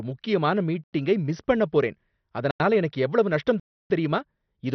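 Speech, heavily dulled throughout: nothing is left above about 6.1 kHz, and the remaining sound has a gurgling, granular roughness. This is most likely MP2 compression at a low rate, on the order of 48 kbps. Too few bits forced whole upper sub-bands off and left the rest coarsely quantised. Unlike a plain low-pass filter, which only sounds muffled, the bands here flicker in and out and carry grainy distortion. There are also three blocks of digital silence, each a hard cut to silence with no fade. The first runs from 0.84 to 0.93 s and the second from 2.51 to 2.60 s. Both last about 93 ms, which fits a 4096-sample buffer that was not filled in time. The third, from 3.60 to 3.90 s, is a longer hole of about 304 ms. A dropout or packet-loss concealment would fade, smear or repeat the sound. These gaps instead switch off abruptly to dead silence and snap back.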